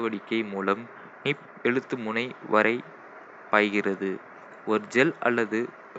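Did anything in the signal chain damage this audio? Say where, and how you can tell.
No, nothing in the signal chain has damaged this speech recording. The only background is the room's own noise, sitting about 46 dB below the speech, which belongs to the acoustic space around the microphone and not to any stage of the system.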